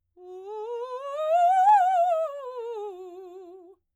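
Dropped samples at 1.69, 2.52 and 3.38 s: each is a single sharp click in the music. The likely cause is a couple of samples missing from the stream, making the waveform jump abruptly to a later value, far too brief to remove any audible sound.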